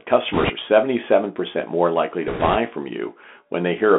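From start to end the speech carries the Bluetooth CVSD headset codec. Its sound fits a 64 kbps one-bit delta stream whose adaptive step cannot keep up with fast, loud high content. The band is confined to roughly 250 Hz to 3.5 kHz, s sounds turn scratchy, and a grainy hiss sits under everything. That steady granular roughness, rather than the warbling or swirling of a block codec, marks it as CVSD.

From 0.33 to 0.51 s, and again from 2.28 to 2.56 s, come bit errors on a Bluetooth voice link, at roughly 7 percent in the first burst and 5 percent in the second. Each flipped bit nudges the delta-modulated waveform only slightly, and the adaptive step soon recovers, so the speech gains a rushing, crackly wash. There are no sharp clicks or dropouts, which is what separates this from packet loss.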